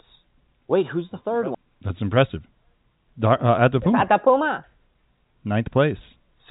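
Nothing goes wrong anywhere in this speech, which just sits in its ordinary G.711 telephone coding with nothing above about 3.8 kHz, as you'd expect from a phone line.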